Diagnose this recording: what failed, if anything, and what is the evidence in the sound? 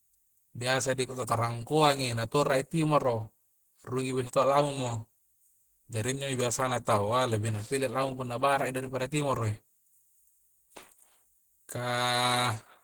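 Codec stage: the speech is hoarse, grainy and muffled throughout, likely Opus compression in hybrid mode at 16 kbps. A speech model codes the low band and the upper bands are rebuilt by folding lower bands or with noise, so a spectrogram shows smeared, grainy texture up to 20.1 kHz, with few holes.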